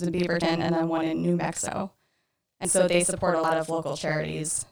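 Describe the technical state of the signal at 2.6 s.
At 2.65 s a dropped buffer (overrun) likely occurred: samples weren't collected before being overwritten, so about a tenth of a second vanishes, heard as a jump in the sound just before "so they support a". Throughout, including this moment, a channel delay (doubling) leaves one channel 40 ms late before summing to mono, so every sound carries a same-level doubled copy.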